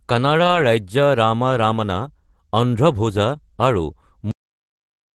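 From 0.39 to 0.65 s, just before "ৰাজ্য ৰাম ৰমণ’", there is a lost packet rebuilt from error correction. Several packets never arrived, and the decoder substituted the low-bitrate copies carried in the following packets. That is about 140 ms of rebuilt audio, so there is no gap, but the passage sounds rougher and noisier than the surrounding Opus-coded speech.

At 4.31 s the clip has a cut-off end. The final buffers were never written, so the speech stops mid-sound and falls straight to digital silence with no natural decay. That silence holds for the remaining 0.84 s instead of the audio trailing off.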